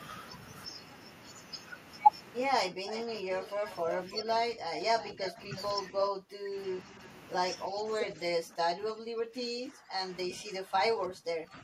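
From 2.68 to 3.64 s the speech dips by about 15 dB and thins. The same happens at 4.23–4.81, 5.13–5.53 and 5.91–6.57 s, deepest there at about 25 dB, and from 7.69 s to the end at about 20 dB. This is speech suppressed in double talk, likely an echo canceller turning the talker down while both sides spoke. Overlapping this, a faint delayed copy of the speech, about 10 dB down and trailing by roughly 0.31–0.33 s, appears at 2.87–4.22 s, 5.00–5.62 s and briefly at 6.03–6.08 s, where it is stronger, about 5 dB down. This is echo leak, likely residual loudspeaker pickup that the far-end canceller failed to remove and sent back.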